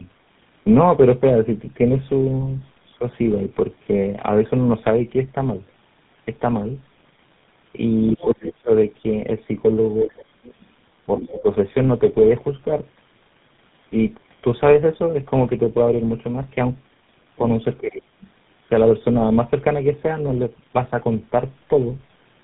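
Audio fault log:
throughout: tandem speech coding; sound passes through three speech coders in a row, each reworking the last one's damage, leaving rough, muffled, warbly speech; spectrogram shows a hard ceiling near 3.8 kHz and smeared formants.
10.1–10.54 s: other side's voice leaking through; a very faint second voice appears, likely from loudspeaker echo the canceller missed; waveform shows a low-level burst beneath the main speech.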